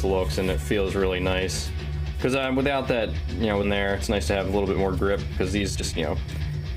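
At 3.63 to 3.65 s there is a skip ahead: roughly a second of audio was discarded while later material was already queued, so playback jumps straight across the gap. Unlike a dropout, no silence or filler marks the loss. The two edges simply butt together.

From 5.08 to 6.52 s a jitter buffer speed-up plays the audio at about 116% speed. Short pitch-period slices, around a third of a second in total, were cut to drain excess buffered delay. It sounds rushed, yet the pitch stays put, which separates it from a resampling error.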